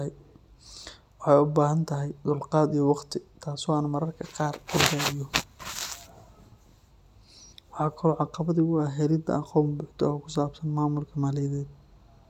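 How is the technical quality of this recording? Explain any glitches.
Nothing stood out as a technical problem when listening to this speech recording, and there are no glitches to explain.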